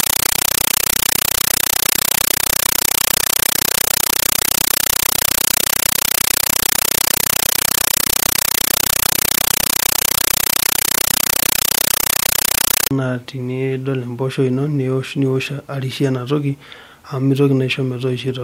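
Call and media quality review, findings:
Compressed stream played as audio, 0.00 to 12.91 s. Loud chattering static replaces the speech. Receiver took Dolby Digital (AC-3) over S/PDIF/HDMI as plain PCM: 8 ms noise bursts, zero padding, 31.25 per second. Consistent with 384 kbps AC-3.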